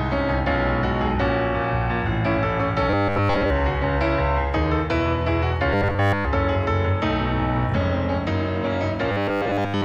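Audio likely arrived too seldom, so a short segment kept being replayed while real audio was skipped. This robotic sound from repeated short buffers leaves a rigid, metallic 100 Hz buzz, which fits a 10 ms buffer, at 2.90–3.50 s (mostly), 5.73–6.25 s (entirely) and 9.12 s to the end (mostly).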